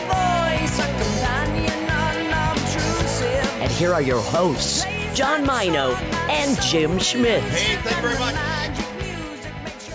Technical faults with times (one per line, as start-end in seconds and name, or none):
none